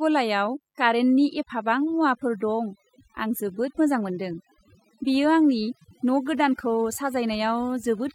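A mains buzz runs through the whole clip, sitting roughly 20 dB below the speech. It is built on 50 Hz: sharp switching spikes, twice per mains cycle, from something like a dimmer, a rectifier or an unshielded lead, feed into the signal path and produce a dense ladder of harmonics extending into the kilohertz range. The result is a steady, raspy buzz rather than a smooth hum, present under the speech and in the pauses alike.

Overdone noise removal is also present from start to finish. The reduction was set too aggressively, so individual frequency bands are pulled far down or shut off whenever their level falls close to the tool's noise estimate. Low-level parts of the speech are caught by the same rule and removed with the noise. The background in the gaps between phrases drops and breaks up into twinkling, warbling specks.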